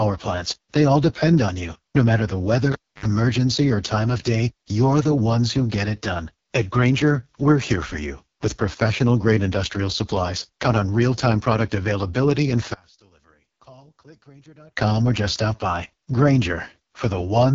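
A speech recording passed throughout through the AMR wideband (HD Voice) codec at what sounds like its lowest rate, around 6.6 kbit/s. At that rate the damage is heavy: the voice comes out rough and raspy, because the codec's pulse-excited vocal tract model has too few bits to track the signal accurately. Everything stops at about 7.3 kHz, and the top band from 6.4 kHz upward is filled with shaped noise rather than real content.

From 2.72 to 3.06 s there is a cable pulled and plugged in. A pop marks the disconnection, and the signal then drops to near silence for roughly 286 ms. A short burst of 50 Hz mains buzz follows, lasting about 74 ms, while only the tip of the plug is making contact. A second pop marks the point where the connection is fully restored and the audio returns.

Between 12.74 and 14.77 s the level falls by about 29 dB, leaving only a faint remnant of the voice. The likely cause is one channel inverted in polarity before a mono sum. 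With one channel reversed, the centred speech common to both channels cancels almost entirely, and only the small difference between left and right survives the fold-down.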